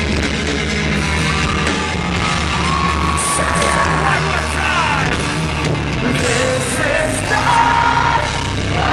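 Nothing stood out as a technical problem on listening.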